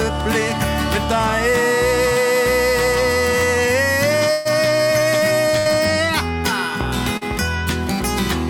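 At 4.31 to 4.47 s and 5.59 to 5.67 s, a burst of packet loss drops about 140 ms and 60 ms; the receiver extends the preceding sound as a fading fill, then resumes past the gap. At 7.17 to 7.23 s, a short concealed packet loss patches a 40 ms hole with synthesized continuation, heard as a brief smear.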